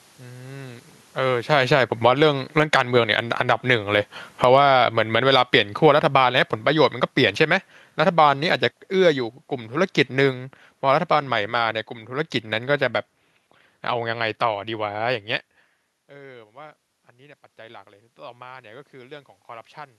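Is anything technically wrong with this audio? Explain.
Yes, the automatic gain control is audibly pumping the level up and down in this speech clip.

Automatic gain falling, from 1.41 to 3.66 s and again from 4.28 to 11.87 s: the control judged the input too loud and pulled its gain down gradually, by about 13 dB and then about 16 dB. The voice and room noise sink together.

Automatic gain rising, from 16.09 to 19.77 s: after the input dropped by about 20 dB as the talker moved away around 15.5 s, the control slowly raised its gain by about 6 dB. Voice and room noise swell together over several seconds.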